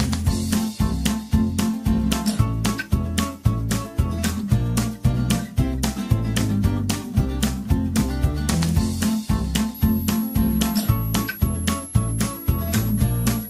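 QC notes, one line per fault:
9.74–13.50 s, switching supply whistle: a thin high whine comes in and stays to the end, wandering between about 11.0 and 11.8 kHz, sitting roughly 15 dB under the main sound. That's a switch-mode supply dropping into an audible burst mode or beating against another one, so its whistle lands in-band and the pitch slides as the load on it shifts.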